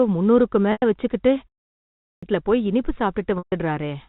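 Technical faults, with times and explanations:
0.72 to 0.82 s and 3.38 to 3.52 s, packet loss with pitch repetition: gaps of 100 ms and 140 ms, each pointing to several packets lost in a row, are bridged by repeating the last pitch period, heard as a briefly held, buzzy tone that fades before the speech resumes. Unlike a muted pause, the sound does not drop to silence cleanly.
1.73 to 2.23 s, clipped start after a pause: after a 0.33 s pause, the output device is slow to wake, so roughly half a second of the returning speech is swallowed and it starts abruptly without its first sounds. Unlike a muted pause, where the sound returns intact, speech is actually lost here.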